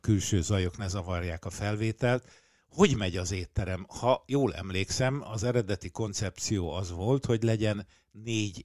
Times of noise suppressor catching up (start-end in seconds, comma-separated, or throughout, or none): none